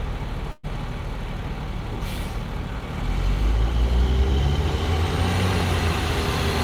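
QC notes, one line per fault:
0.51–0.66 s, call audio freeze: the sound stalls, its last instant stretched into a fading buzz for 121 ms, then 20 ms of silence, before resuming where it stopped with nothing lost. Likely delayed packets emptied the jitter buffer, pushing everything after 121 ms later.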